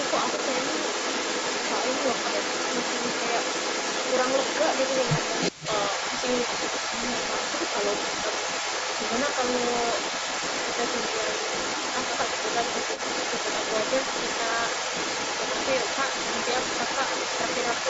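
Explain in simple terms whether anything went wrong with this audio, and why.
Yes, two things went wrong. Throughout the recording, a second copy of the speech follows the original about 0.38 seconds later, almost as loud as the first. That is an echo leak. The likely cause is that the person at the other end had the call on a loudspeaker, and their phone failed to cancel what its microphone picked up, so the sound was sent back. Unlike room reverberation, which smears sound smoothly, this is a distinct, late repeat.

There are also two very brief glitches, at 5.05 s and 11.71 s, lasting 15 and 7.5 milliseconds. These are concealed Bluetooth headset packet loss. Small pieces of audio were lost between the headset and the phone, and the phone filled each gap by repeating a matching stretch of the sound just before it. The single loss at 11.71 s is nearly hidden. The headset's normal wideband sound is still audible, with its slight graininess on louder moments.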